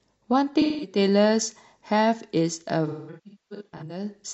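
AAC frame loss with concealment at 0.61 to 0.97 s and 2.87 to 4.04 s: missing frames are rebuilt from the last good spectrum, giving smeared, phasey patches, the later ones scattered in runs of up to roughly 0.2 s.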